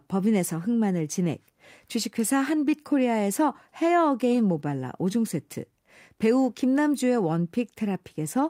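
No technical fault can be heard anywhere in the recording: the signal stays continuous and intact throughout, with nothing interrupting or degrading it at any point.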